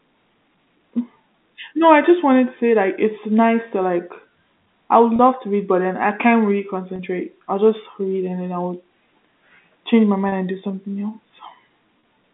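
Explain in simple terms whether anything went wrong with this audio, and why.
Four brief gaps come from packet loss with pitch repetition: at 5.16 s after "I would", at 6.96 s after "then I can't really", at 10.29 s after "change my", and at 12.0 s. Each time about 30 ms of audio went missing, and the phone quickly repeated the last bit of voice to cover it. That produces a short held, buzzy moment rather than the silent hole or click of a plain dropout. The narrow telephone sound itself is normal.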